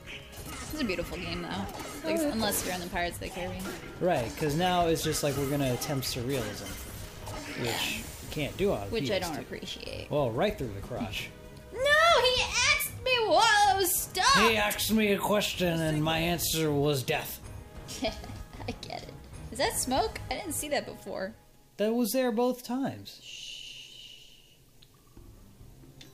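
No technical faults can be heard anywhere in this audio. Nothing in it stands out as broken or in need of attention.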